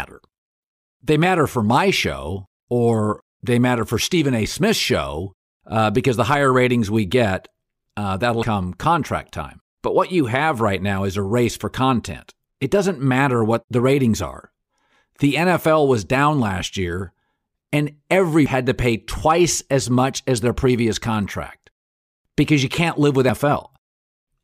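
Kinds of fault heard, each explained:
Damaged data in a compressed stream: part of the encoded speech stream has been corrupted, so the decoder cannot parse those frames, loses sync and skips forward to the next valid frame header. Here it shows as three brief glitches, at 8.43 s between "we get uh that'll" and "contract time", at 18.46 s between "down last year and" and "to pay twice as", and at 23.29 s near the end.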